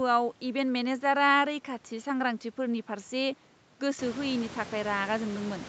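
No faults: the speech passes through a call path with its content ending at 8 kHz, and the room noise rises by about 18 dB at roughly 4 s but stays about 17 dB below the speech.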